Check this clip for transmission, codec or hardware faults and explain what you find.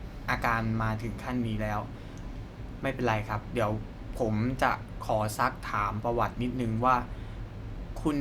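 Nothing wrong can be heard anywhere in this recording.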